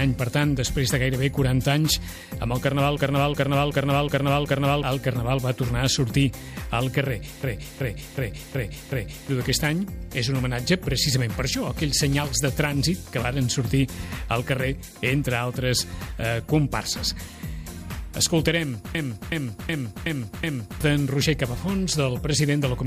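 A stuttering repeat of one short fragment, about 0.37 s long and cycling five times at 2.69 Hz, occurs at 2.97 to 4.83 s, 7.43 to 9.29 s and 18.95 to 20.81 s. This system hang loop comes from a stalled computer or driver while the hardware replayed its ring buffer, which fits a 16384-sample buffer. Each stall loses roughly two seconds of audio.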